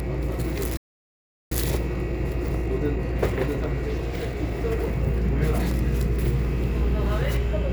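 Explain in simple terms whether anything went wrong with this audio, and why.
At 0.77 s the everyday sounds in this clip cut out and leave about three-quarters of a second of silence, picking up again at 1.52 s. This is a playback stall. The player most likely ran short of audio data or got held up, and went quiet until it caught up.

From 1.52 s to 4.52 s the sound runs a little fast, about 1.1 times normal speed, with no rise in pitch. This is time-compressed catch-up. The player trims and blends tiny slices of audio to make up the lost time.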